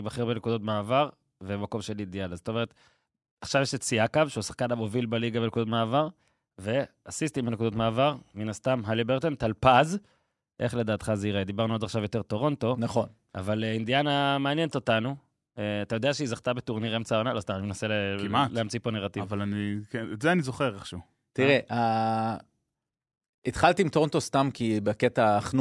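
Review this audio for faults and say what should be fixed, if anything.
Nothing stood out on listening to this speech recording, so there is nothing to fix.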